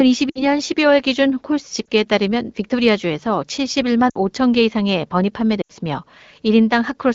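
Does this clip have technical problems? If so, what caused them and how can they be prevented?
Yes, there are lost AMR speech frames at 0.29 to 0.45 s, 1.86 s, 4.09 to 4.16 s and 5.62 to 5.72 s. These gaps of about 60, 20, 60 and 80 ms point to radio errors corrupting frames. The AMR-WB decoder covered each gap by reusing the last good pitch and vocal tract settings at falling gain. A cleaner radio link or stronger error protection would prevent this.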